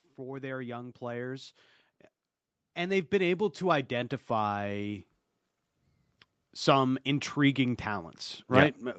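From 0.14 to 1.65 s the speech and the background swell together by about 7 dB, then again from 2.76 to 5.11 s by about 9 dB. This is automatic gain rising: the gain control judged the input too quiet and turned it up gradually.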